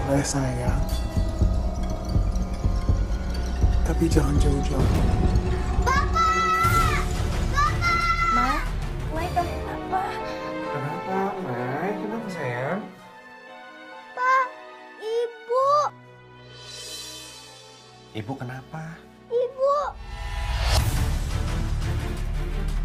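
At 4.79 to 4.81 s, roughly 0.7 s of audio was dropped while later material was already queued. This is a skip ahead: playback jumps forward with no gap filled, and the sound on either side of the cut is joined almost directly.

Jitter buffer speed-up follows, where the buffer held more audio than its target and trimmed short pitch-period pieces repeatedly. From 5.02 to 6.78 s and 8.10 to 9.09 s, the sound runs at 105% speed with unchanged pitch, shedding about 0.1 s and 50 ms. At 12.84 to 13.85 s it reaches 112%, removing around 150 ms, and sounds noticeably hurried.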